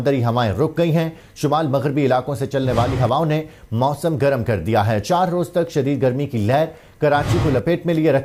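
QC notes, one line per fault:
No technical faults are audible anywhere in the signal.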